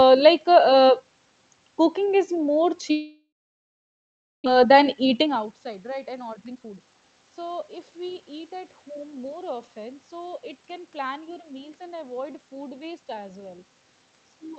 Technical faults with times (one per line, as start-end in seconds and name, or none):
2.91-4.48 long network dropout
4.56-8.22 jitter buffer speed-up